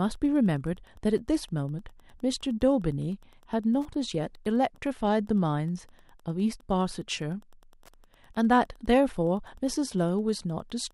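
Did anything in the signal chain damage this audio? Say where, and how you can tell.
Yes. There is Wi-Fi interference in the analogue wiring, present from start to end of the speech. A steady ticking sits well under the speech, roughly 40 dB down, repeating every 102.4 ms, so just under ten ticks a second. That exact spacing matches a Wi-Fi access point's beacon interval. A nearby radio's bursts are being picked up by the audio circuit and rectified into audible clicks before the signal ever reaches the converter.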